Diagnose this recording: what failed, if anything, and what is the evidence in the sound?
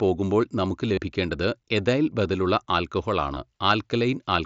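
Concealed Bluetooth headset packet loss at 0.95 to 0.97 s and again at 3.34 to 3.37 s, on the wireless link. Each gap of about 22.5 ms, which fits a run of three lost frames, is briefly filled with a repeated stretch of the preceding waveform.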